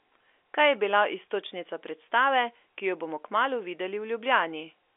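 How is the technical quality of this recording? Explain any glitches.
Nothing here counts as a glitch; the speech comes down an ordinary telephone line with G.711 A-law coding, so it has the narrow 300 Hz to 3.5 kHz band you'd expect from a landline, and nothing unusual happens along the way.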